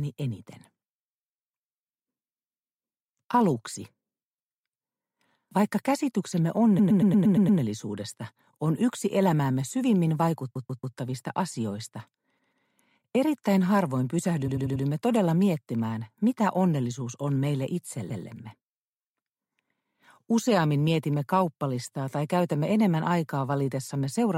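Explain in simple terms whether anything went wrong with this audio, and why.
Something did go wrong: repeated frames. A short chunk of the compressed audio was stored or sent more than once, so the player plays the same slice again and the sound stutters in place. This happens five times: at 6.78 s a 0.12 s chunk plays seven extra times, at 10.54 s a 0.14 s chunk three extra times, at 12.38 s a 0.14 s chunk twice more, at 14.47 s a 0.09 s chunk four extra times, and at 18.09 s a 0.14 s chunk once more. Each stutter stretches the audio by the repeated time, from about 0.14 s up to 0.81 s.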